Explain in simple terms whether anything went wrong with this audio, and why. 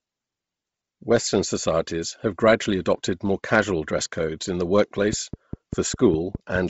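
Two things went wrong here. First, the whole recording sounds squeezed through heavy Bluetooth LC3 compression, likely from a Bluetooth LE Audio link. That codec chops the sound into tiny 7.5 ms slices and, when it's short on data, throws away a lot of detail and patches the gaps with noise. So the speech has a breathy, grainy edge, and everything above about 7.7 kHz is simply gone, making it sound dull and a bit fizzy.

Second, right after "dress codes in the", from 5.13 s to 6.57 s, there's a train of clicks: about seven sharp ticks, evenly spaced at roughly five per second. They're the same kind of pop each time and poke out clearly above the speech. That steady, repeating pattern points to something injecting pulses into the signal, such as electrical interference from nearby gear or a faulty connection or power supply.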